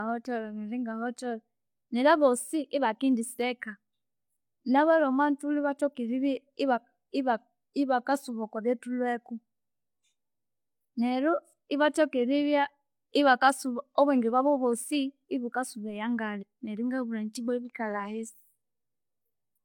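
Throughout the speech, nothing sounds above 18.5 kHz and coarse low-bitrate smearing remains despite the generous MP3 rate: likely low-bitrate audio saved at a high bitrate.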